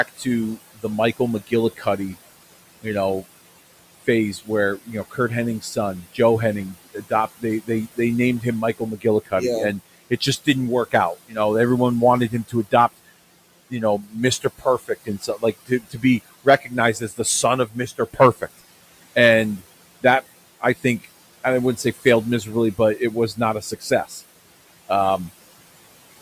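Noise suppressor artifacts run through the whole recording. The room noise sits about 18 dB below the speech, and the suppressor pulls it down by about 17 dB in the pauses. The floor pumps up under the speech and drops away between phrases. On a spectrogram the gaps show as patchy, speckled dark regions rather than an even noise floor.

Speech cut by the noise suppressor follows in seven stretches: 0.08 to 2.16 s, 4.01 to 6.19 s, 6.93 to 9.32 s just before "yeah and", 10.1 to 11.37 s between "yeah and" and "everyone wanted", 12.3 to 12.98 s right after "everyone wanted", 13.7 to 18.6 s, and 20.61 to 24.21 s. The suppressor mistook quiet speech energy for noise and turned it down along with the background, by about 16 to 18 dB at worst in most stretches and about 13 dB in the last. Soft consonants and word tails sound swallowed or faded. Most stretches lose a few tenths of a second in total, while 13.7 to 18.6 s loses around one and a half seconds. 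In the waveform, syllable edges look abruptly clipped in level. On a spectrogram, the high-frequency fricative energy at those edges disappears in blocky, frame-sized chunks.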